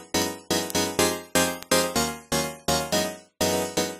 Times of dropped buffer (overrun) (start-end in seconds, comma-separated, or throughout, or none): none